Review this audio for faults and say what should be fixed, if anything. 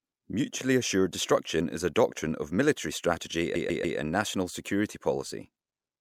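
A run of repeated frames was written or sent more than once, so the decoder played the same 144 ms block three extra times, from 3.54 to 3.97 s, right after "doctrine of military strategy" and before "and national security". The result is a stutter, and the clip runs 432 ms longer than it should. Deduplicating frames by sequence number or timestamp before decoding would prevent this.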